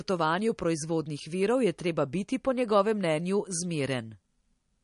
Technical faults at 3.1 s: MP3 compression

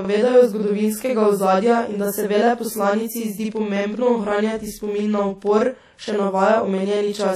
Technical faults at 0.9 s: channel delay (doubling); WMA compression

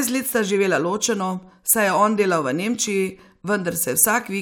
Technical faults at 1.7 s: none

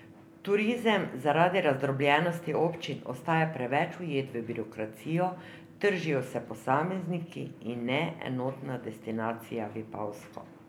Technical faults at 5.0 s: none

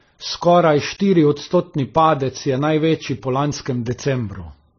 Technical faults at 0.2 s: transcoding between lossy codecs

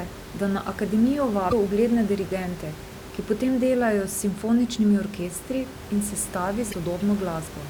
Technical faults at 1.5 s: broken MP3 bit reservoir

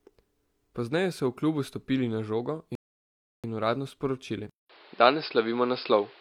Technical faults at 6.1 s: input switched to a poorer device

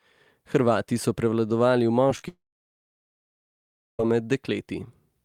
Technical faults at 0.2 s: none

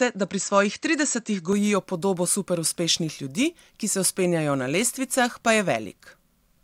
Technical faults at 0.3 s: input switched to a poorer device

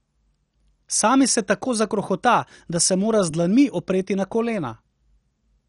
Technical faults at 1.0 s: MP2 compression

